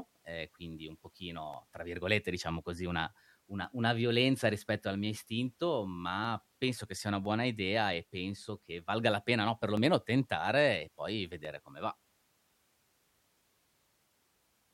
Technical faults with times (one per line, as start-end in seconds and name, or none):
1.54 dropped samples
3.64 dropped samples
6.25 dropped samples
7.25 dropped samples
9.77 dropped samples
11.45 dropped samples